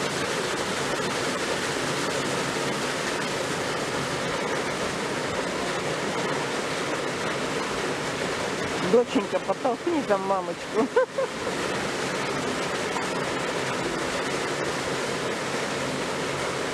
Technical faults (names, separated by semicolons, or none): none